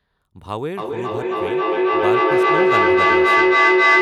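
Speech; from 0.77 s, feedback echo between two devices repeats each word roughly every 300 ms, building to about 12 dB above the speech instead of fading like single echo.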